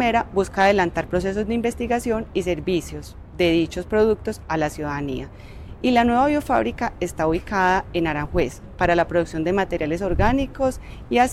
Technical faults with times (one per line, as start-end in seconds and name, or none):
none